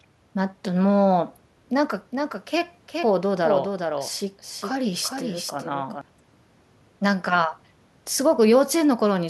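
From 2.11 s to 6.01 s the speech carries a doubled audio track. A second, full-band copy trails the original by roughly 0.4 s, about 5 dB quieter. It has no decay and no room colour, so it sounds like a flat, detached repeat rather than an echo. It cuts in and drops out abruptly at those times. The likely cause is a second, slower capture path mixing the same signal back in late.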